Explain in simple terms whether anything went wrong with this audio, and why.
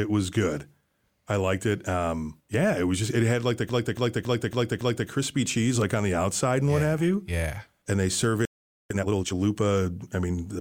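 Repeated frames, from 3.69 to 5.09 s: right after "it had like the", a chunk of about 0.28 s plays five extra times before the speech moves on to "cheese like on the". A short stretch of compressed audio was sent or stored more than once, so the decoder simply played the same piece again and again. It sounds like a stutter, and it adds about 1.4 s to the recording.

Playback stall, from 8.45 to 8.90 s: after "they serve", the sound cuts out for about 0.45 s in mid-phrase and then resumes. The likely cause is that the player ran out of incoming audio data or was briefly held up, so it had nothing to output and fell silent until data was available again.

Time-compressed catch-up, from 8.90 to 9.34 s: straight after that gap, the speech runs at about twice its normal speed while keeping its normal pitch. The player is making up for the lost time by snipping out small slices of audio and blending the remaining pieces together. 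That makes the speech sound rushed until it is back in step.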